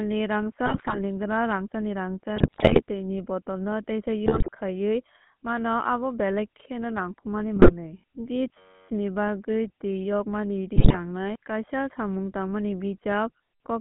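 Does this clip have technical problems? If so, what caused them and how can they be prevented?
Yes. GSM full-rate codec, throughout the clip: the speech is confined to a 150 Hz to 3.4 kHz band and rebuilt from a vocal-tract filter driven by sparse, regularly spaced pulses. This gives the plainly audible buzzy, gravelly roughness that fits the 13 kbps full-rate coder. Carrying the call on a wideband modern codec such as AMR-WB, EVS or Opus would prevent it.

GSM bit errors at 0.66–0.99 s, 2.36–2.82 s, 4.26–4.49 s, 7.56–7.73 s and 10.76–10.97 s: flipped bits reached the speech decoder, corrupting the filter, pitch and gain values for runs of frames. The speech breaks into squawks, pops and gargling. A stronger, more reliable radio link, with better coverage or error concealment at the decoder, would prevent these.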